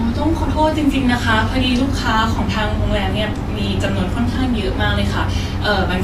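From start to finish, the speech carries plainly audible damage from lossy coding, most likely Vorbis compression. The treble sounds hissy and grainy. Sibilants smear into a noisy wash. Consonant onsets lose their edge. This happens when the encoder keeps a smooth spectral outline but quantises the detail above it very coarsely. Fine structure is replaced by noise of similar energy. The top end also sounds trimmed, which fits a low bitrate near 33 kbps.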